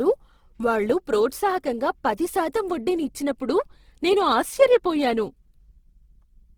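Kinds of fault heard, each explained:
Opus compression: The speech sounds rough and grainy for the whole clip, with a noisy texture instead of the swirly holes you'd hear from MP3, and the damage is plainly audible. That's likely Opus in its music (CELT) mode running short of bits. It keeps each band's energy but fills in the detail with folded or noise-like content. Bandwidth stays full, reaching about 20.2 kHz, and the roughness fits a low rate of around 16 kbps.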